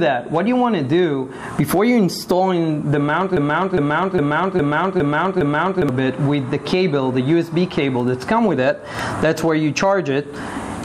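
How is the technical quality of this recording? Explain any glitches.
The recording has one glitch, a broken-record loop. From 3.37 s to 5.89 s, a fragment of about 0.41 s plays six times back to back, each copy identical, before the sound moves on. The likely cause is a player, encoder or stream that stalled and kept resending the last chunk it held, so whatever should have played in those two and a half seconds is lost. Unlike an echo or reverb tail, the repeats don't fade or smear. Each copy restarts at full level with the same seam.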